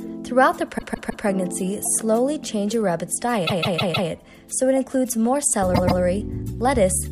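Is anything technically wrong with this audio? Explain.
Yes. Repeated frames cause stutters at 0.77–1.24 s, 3.46–4.09 s and 5.74–6.00 s, where a run of compressed frames was written more than once and the decoder replays the same 157 ms (last case 131 ms) block three, four and two extra times, adding about 1.4 s.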